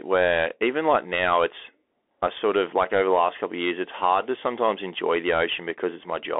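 Bluetooth CVSD headset codec throughout: one-bit delta coding confines the speech to about 300 Hz to 3.5 kHz, with plainly audible granular hiss and scratchy sibilants.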